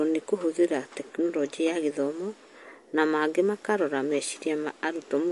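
Speech, and the whole thing carries MP3 compression damage that's plainly audible: nothing above about 11.3 kHz, plus a watery, swirly quality as weak frequency lines flicker between frames. That's likely a starved encoder, which fits a bitrate around 48 kbps.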